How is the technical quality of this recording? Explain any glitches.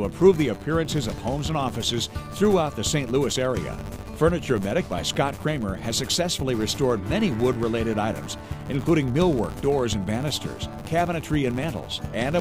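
The recording is marred by one fault that runs throughout: a filter restarted on every block. The processing stage forgets its internal state at each block boundary and starts from silence, so every block opens with a small transient. Those transients repeat 100 times a second, which fits blocks about 10 ms long, and blend into a steady 100 Hz buzz whose loudness rises and falls with the level of the sound.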